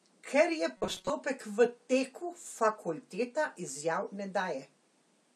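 From 0.77 to 1.10 s, new audio was likely arriving too seldom, so the playback path filled the gaps by looping its last short buffer over and over while most of the real signal in that stretch was skipped. This produces robotic sound from repeated short buffers: a rigid, metallic buzz pinned at 188 Hz, which fits a loop about 5.3 ms long, with the voice still loosely tracing the speech beneath it.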